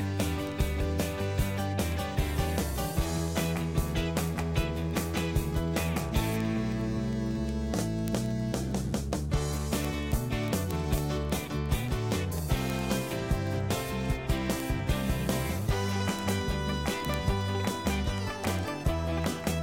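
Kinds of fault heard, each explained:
Word clock ticks: an unlocked receiver clock slips one sample about twenty times a second, giving evenly spaced ticks, unlike randomly timed clicks.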